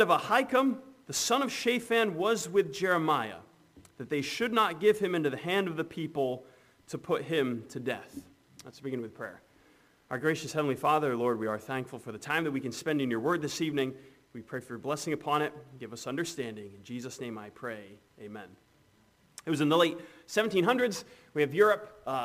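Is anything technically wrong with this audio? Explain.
Yes. Sample clock jitter runs throughout: timing errors of roughly 7 microseconds make a hiss about 25 dB below the signal, rising on loud, bright passages.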